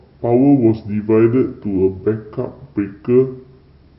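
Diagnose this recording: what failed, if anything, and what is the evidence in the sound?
A wrong sample rate fault at the playback stage runs through the whole speech clip: it plays at 0.726 times normal speed and about 5.5 semitones low, sluggish and deep, which fits 44.1 kHz material clocked out at 32 kHz. A spectrogram shows every harmonic and formant scaled downward and syllables stretched in time.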